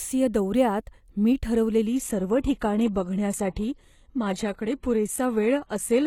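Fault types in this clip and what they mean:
Adaptive stream at a lower bitrate: from 1.87 s, right after "दौऱ्यात मी", the speech switches without any gap to a lower-quality version of the stream, as the player reacts to a slower connection, and stays there to the end. The top end dulls and coding artefacts rise, which fits a drop from roughly 96 to 16 kbit/s. On a spectrogram, energy above 12.3 kHz stops abruptly at that point. The waveform shows no break.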